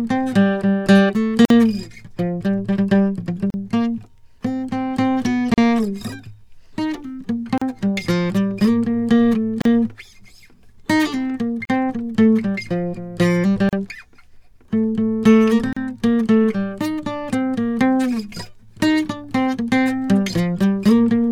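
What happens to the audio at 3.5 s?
A gap at a join of encoded pieces opens at 3.50 s and lasts until 3.54 s, about 38 ms of silence in the music. Separately encoded segments were spliced without trimming the encoder's start delay and end padding, leaving a hole with smeared edges that recurs every 2.0 s.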